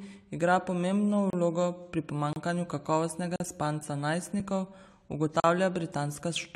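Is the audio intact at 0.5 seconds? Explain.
Yes, the speech at 0.5 seconds is intact, with no fault audible at that moment.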